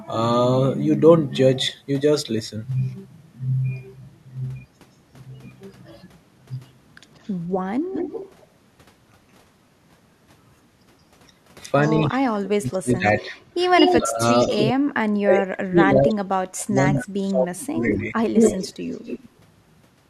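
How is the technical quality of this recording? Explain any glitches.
The recording has two recurring faults: a delayed echo of the speech and stretches where the speech itself is pushed down.

Echo leak at 7.22–8.45 s, 11.84–14.72 s, 16.58–17.05 s and 17.97–19.25 s. A far-end loudspeaker likely fed back into its microphone, and the echo canceller let some of it through, so a second copy trails the speech by 174 to 182 ms. It sits about 10 dB down at first and about 15 dB down at 16.58 s, but at 11.84 s and 17.97 s it is roughly as loud as the speech.

Speech suppressed in double talk, from 12.1 to 18.16 s. While both sides overlap, the echo canceller likely mistakes the talker for echo and attenuates them along with it. The speech dips in pieces, around three seconds in total across that span, sinking as far as about 30 dB at the deepest points, so syllables vanish or turn faint and thin.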